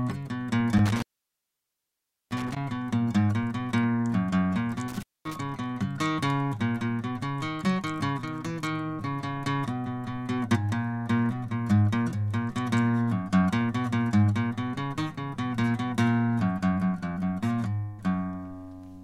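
Music, with two dropouts from an intermittent contact, a loose cable or plug briefly opening the signal path. The first runs from 0.77 to 2.57 s, the line open for about 1.3 s. The second, from 4.88 to 5.36 s, opens for about 0.22 s. Crackle marks the edges of each gap, and faint hiss fills it. That scratchy make-and-break separates it from a digital dropout, which cuts cleanly to silence.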